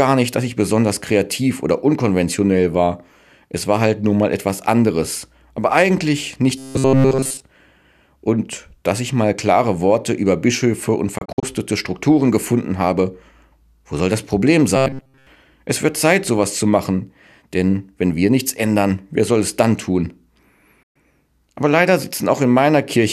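Robotic sound from repeated short buffers appears from 6.58 to 7.42 s and again from 14.77 to 15.27 s. In both stretches the audio turns into a rigid metallic buzz at 133 Hz, with essentially all of it made of repeats. The likely cause is that fresh audio arrived too slowly and playback kept looping the last fragment of about 7.5 ms, which forces that fixed pitch while the real material is skipped.

A digital broadcast dropout hits at 11.18 to 11.43 s. The sound breaks into short silent holes, about 120 ms lost in total, scattered over about 240 ms, with the longest single gap 48 ms. Each hole fades in about 8 ms. The receiver muted whenever frames failed to decode and resumed once good ones arrived. A second dropout at 20.83 to 20.96 s removes another 120 ms.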